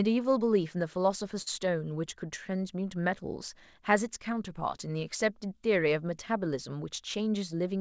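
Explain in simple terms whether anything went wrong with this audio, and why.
Two things went wrong in this speech, both caused by how the call delivered the audio.

At about 1.42 to 1.48 s there is a short stall from a late packet. A piece of audio arrived late, so the receiver held the last sound for 44 ms until it caught up. Nothing is lost, which sets it apart from a dropout. One sound just lingers a moment too long.

From 7.01 to 7.67 s there is a jitter buffer speed-up. The receiver had built up extra waiting audio and trimmed tiny slices, about a twentieth of a second in all, so the speech runs at 106% speed. The pitch stays the same, which is how it differs from a sped-up recording that sounds higher.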